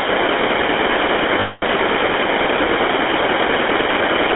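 Speech heard through the GSM full-rate codec, with plainly audible buzzy, gravelly roughness throughout and a band of roughly 300 Hz to 3.5 kHz. The codec rebuilds the voice from a vocal-tract model excited by sparse, regularly spaced pulses, which fits the 13 kbps full-rate mode. From 1.4 to 1.64 s there are lost GSM frames: the decoder repeats the last good frame's settings, so about 0.22 s of sound is held as a rough, metallic ring instead of continuing normally.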